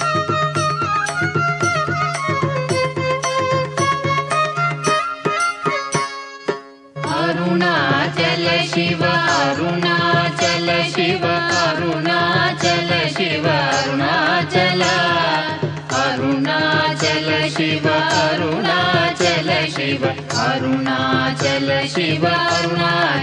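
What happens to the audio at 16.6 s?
Nothing goes wrong at 16.6 s: the audio plays through that moment intact, with no dropout, click or other fault.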